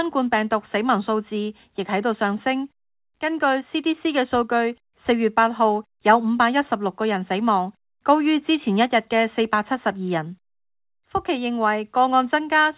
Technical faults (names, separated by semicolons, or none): none